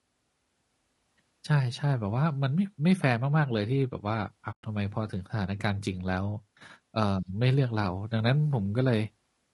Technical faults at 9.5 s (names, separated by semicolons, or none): low-delay AAC compression